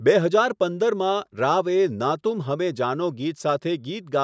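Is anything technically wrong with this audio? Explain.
No, nothing is technically wrong.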